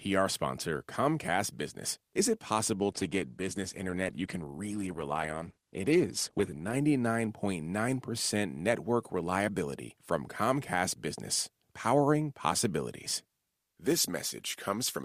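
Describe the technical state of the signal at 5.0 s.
At 5.0 s the speech sounds dull, with nothing above about 12.1 kHz and a grainy, smeared quality. The change arrives suddenly and without any gap, and lasts from 2.75 s to 6.75 s. This is an adaptive stream at a lower bitrate: the player switched to a leaner Opus encoding, which fits a drop from around 64 kbit/s to 16 kbit/s, trimming the treble and raising codec artefacts until it switched back.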